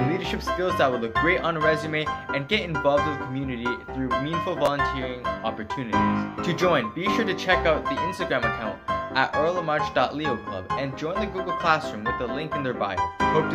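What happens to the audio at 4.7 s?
At 4.66 s there is a brief chunks out of order fault. A 5.8 ms chunk plays two chunks late, after the audio that should follow it, so nothing is missing but the order is scrambled. The three hard joins give a brief jumbled moment. On a waveform they show as abrupt steps, and on a spectrogram as thin vertical broadband streaks.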